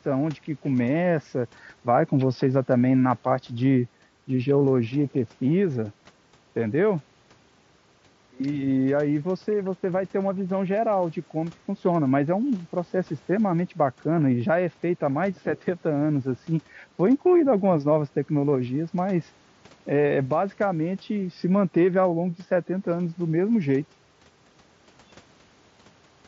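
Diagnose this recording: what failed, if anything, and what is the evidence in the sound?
Nothing has failed here; the speech reaches you over an ordinary Bluetooth headset link running the wideband mSBC codec, and what you hear is simply how that path normally sounds, with no stage along the chain breaking down.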